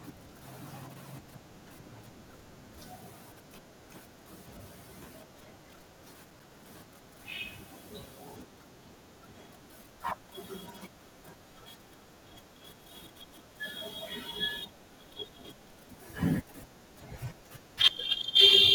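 Loose connector crackle appears from 6.30 to 6.50 s, a brief burst of about 0.2 s in the speech. A worn or dirty contact somewhere in the cable or jack path is momentarily losing and regaining its connection, so the signal is chopped on and off many times in quick succession. The result is an irregular, scratchy crackle laid over the audio for that short stretch, with no steady rhythm to it.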